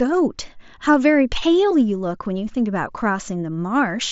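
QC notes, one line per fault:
Speech arrives over a Bluetooth mSBC headset link with nothing above about 7.7 kHz and the light grain that wideband headset coding leaves on louder passages.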